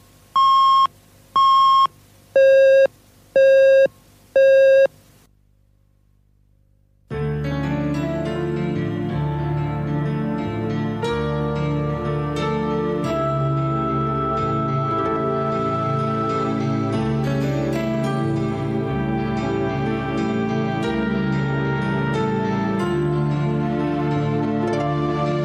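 There are no technical faults to describe.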